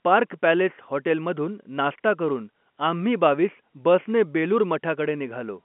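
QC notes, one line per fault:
No fault to note.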